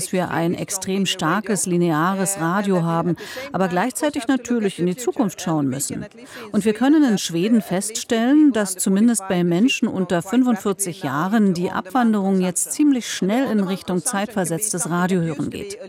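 No technical faults are audible anywhere in the recording.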